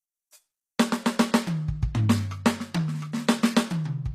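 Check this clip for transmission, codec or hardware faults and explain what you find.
There's one codec fault here, and it runs the whole way through this music clip: it sounds like HE-AAC compression, likely at a low bitrate around 24 kbps. The treble is rebuilt by copying lower bands upward, so the top end sounds gritty and metallic, with harmonics not lining up across the crossover. Nothing comes through above 14.9 kHz.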